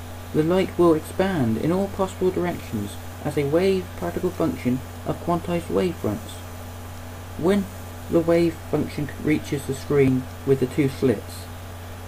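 At 3.14 s and 10.08 s the sound skips ahead, losing about 20 ms, then 40 ms. Each is likely a dropped buffer (overrun).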